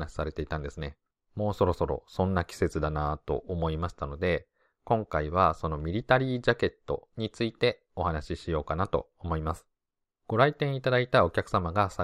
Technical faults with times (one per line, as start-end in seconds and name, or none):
none